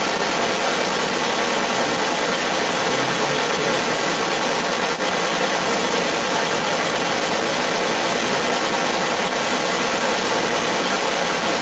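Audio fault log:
Throughout, other side's voice leaking through: a second voice comes through with the speech, roughly 10 dB louder than it. That likely comes from the far end playing on a loudspeaker and an echo canceller that didn't remove it, with everything topping out near 8 kHz from the Opus call path.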